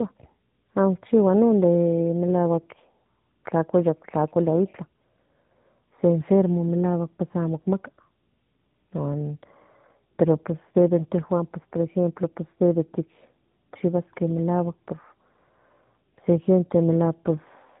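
Throughout, tandem speech coding: two narrowband speech codecs in series re-encode each other's output, leaving speech rough, muffled and warbly, with nothing above 3.8 kHz.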